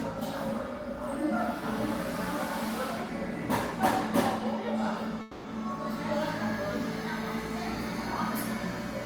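At 5.21 s the audio stalls into a call audio freeze lasting about a quarter second, until 5.46 s. The last sound is stretched into a fading buzz or hiss. Packets were likely held up and the jitter buffer emptied. Playback then resumes intact, 230 ms later.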